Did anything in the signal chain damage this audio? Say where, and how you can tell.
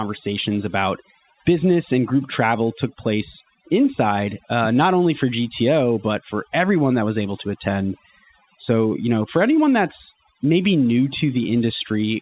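Yes. Throughout the speech, the background falls to near silence and breaks up into twinkling specks, and the voice's quieter parts drop away. This is overdone noise removal applied to a noisy recording. The suppressor was set too aggressively, so every frequency band near its noise estimate gets pushed far down or switched off. That takes low-level speech energy with it and leaves isolated residual bands flickering on and off. The 4 kHz upper limit matches the G.711 mu-law call codec.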